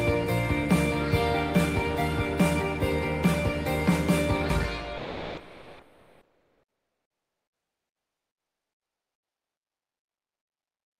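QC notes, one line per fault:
4.97–10.99 s, comfort noise in place of the background: transmission likely pauses under Opus DTX, so steady, featureless synthetic noise replaces the real background, with its level shifted by about 3 dB.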